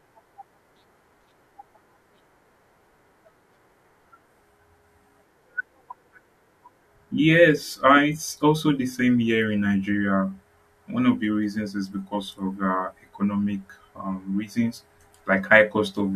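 Nothing in this speech recording stands out as a technical fault; it just runs along without a hitch.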